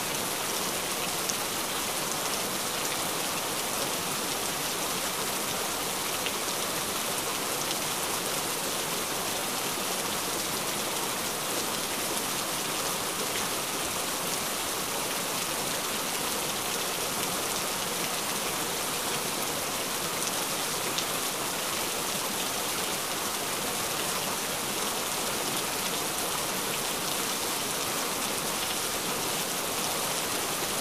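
A brief stutter at 28.65 to 28.72 s, where a 78 ms slice plays twice: repeated frames, likely about three compressed frames resent, lengthening the audio by 78 ms.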